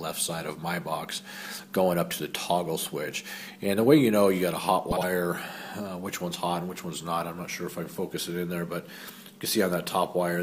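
The audio has frames out of order from 4.91 to 5.04 s: two neighbouring runs, each about two frames, which fits roughly 52 ms blocks, were decoded in swapped order, so the stretch plays as a garbled flutter. Unlike a dropout or repeat, nothing is missing or doubled and no time is lost.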